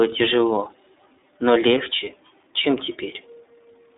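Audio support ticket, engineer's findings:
iLBC codec, whole clip: speech confined to roughly 250 Hz to 3.7 kHz, plainly rough, slightly synthetic texture. Each frame's excitation coded independently. Granularity points to 30 ms frames, fits 13.33 kbps mode. Unlike a plain low-pass or band-limited line: roughness present, not just dullness.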